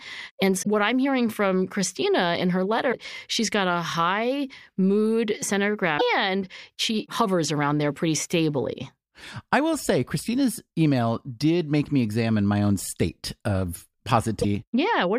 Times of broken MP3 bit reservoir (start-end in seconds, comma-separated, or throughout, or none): 0.62-0.67, 2.91-2.94, 5.97-6.01, 14.41-14.45